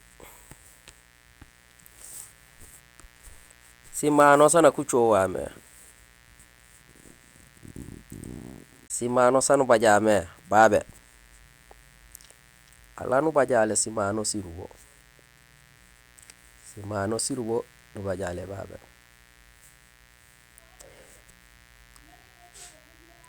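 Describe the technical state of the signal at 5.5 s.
Switching spikes from 60 Hz mains leak in twice per cycle, so at 5.5 s, as throughout, a steady, raspy mains buzz sits faintly beneath the speech.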